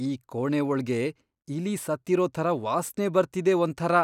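No dropouts, clicks, distortion or timing errors turn up anywhere in the recording; there are no faults to report.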